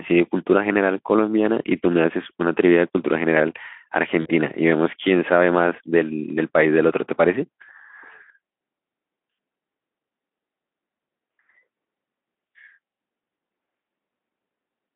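At 4.21 s, about 40 ms of audio goes missing in VoIP packet loss concealed by the speech codec. The decoder fills the gap by repeating its last pitch and filter, fading. The speech smears into a brief buzzy tone or coloured noise. The gap ends at 4.29 s, which fits two lost 20 ms frames, and the voice stays weak for tens of milliseconds after.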